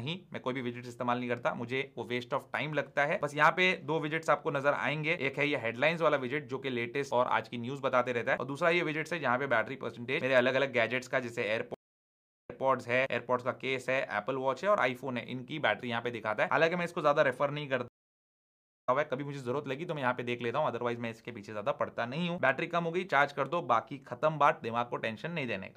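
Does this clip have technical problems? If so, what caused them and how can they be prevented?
Yes. Stream reconnects at 11.74–12.63 s and 17.88–18.89 s: the connection dropped, playback went silent (730 ms, then 982 ms), and a fresh decoder restarted mid-stream. The first resumes 157 ms earlier, repeating a little audio. The second resumes about a second later, skipping ahead. A larger client buffer with automatic resume from the last received position would prevent both.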